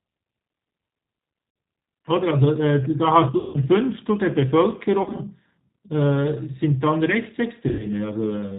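G.729 codec, throughout: the speech is rebuilt at 8 kbit/s from a vocal tract filter, a pitch predictor and a few pulses per frame, with nothing above 4 kHz. The damage is plainly audible: the voice sounds band-limited, slightly rough and synthetic.

VoIP packet loss concealed by the speech codec, at 1.50 to 1.56 s, 3.38 to 3.58 s, 5.02 to 5.20 s and 7.69 to 7.88 s: audio went missing for 60, 160, 100 and 100 ms. At 5.02 s the 100 ms is scattered over 160 ms, with no gap longer than 40 ms. The first gap fits three lost 20 ms packets. Each time the decoder stretches its last pitch and filter into a buzzy tone or coloured noise that fades. The speech stays weak and distorted for a while after audio returns.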